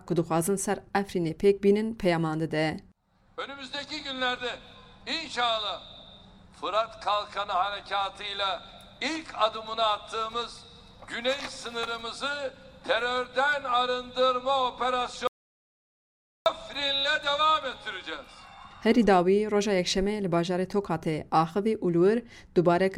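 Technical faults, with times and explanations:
15.27–16.46 s, audio dropout to silence: sound cuts mid-flow into 1.19 s of silence with no room tone, likely from a lost input; the waveform flatlines and the spectrogram goes blank.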